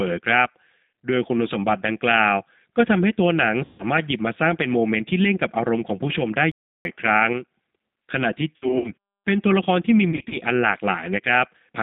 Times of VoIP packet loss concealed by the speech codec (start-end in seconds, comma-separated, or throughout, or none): 3.65-3.84, 8.56-8.91, 10.11-10.35